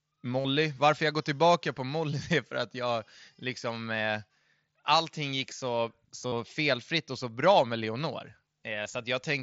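Concealed Bluetooth headset packet loss hits this speech clip at 0.40–0.45 s, 6.28–6.32 s (between "allting gick så" and "felfritt och så bra") and 8.83–8.86 s: about 45, 45 and 23 ms of lost voice packets, filled by repeating recent waveform, giving brief buzzy holds over the wideband mSBC sound.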